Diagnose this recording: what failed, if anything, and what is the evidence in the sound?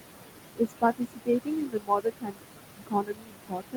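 Call processing failed. Noise suppressor artifacts run throughout, pulling the background down by about 21 dB. The room noise, only about 8 dB below the speech, pumps.

The same stage also produced speech cut by the noise suppressor, from 0.54 to 2.43 s and from 2.7 s to the end. Quieter speech was treated as noise and dropped as much as about 22 dB, sounding swallowed.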